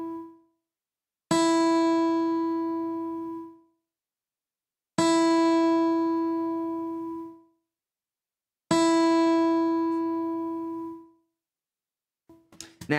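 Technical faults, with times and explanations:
No technical faults detected anywhere in the recording.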